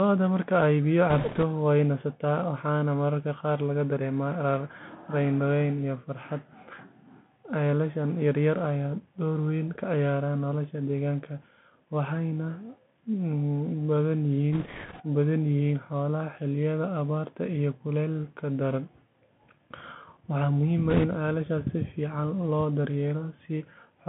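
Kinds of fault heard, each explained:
Bluetooth CVSD headset codec: thin, band-limited speech near 150 Hz to 3.4 kHz with scratchy s sounds and granular hiss, from one-bit delta coding whose adaptive step lags fast, loud changes.
Bit errors on a Bluetooth voice link: rushing, crackly noise without sharp clicks at 1.10 s, 14.53 s and 20.90 s, from a few percent of flipped bits on the headset link.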